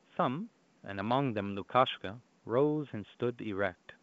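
No technical faults can be heard in this speech recording. Faint room noise sits about 38 dB below the speech, and the wideband telephone coding, which sounds like G.722, carries the speech up to about 7 kHz with at most a faint trace of coding.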